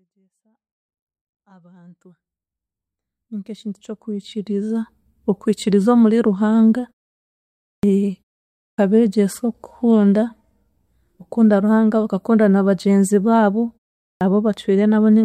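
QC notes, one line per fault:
7.78 s, 8.73 s and 14.16 s, clipped start after a pause: each time the sound resumes after a gap of 0.93, 0.58 or 0.46 s, the first 50 ms or so gets swallowed, so it bursts in abruptly. It sounds like the output device dozing off in silence and waking late.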